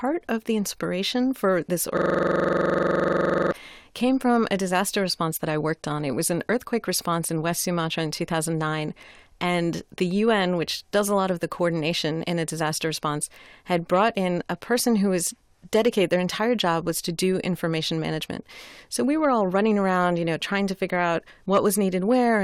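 System hang loop, 1.97 to 3.52 s, after "the inspiration for this": the system stalled, so one 43 ms buffer repeats, giving a rough 23 Hz buzz.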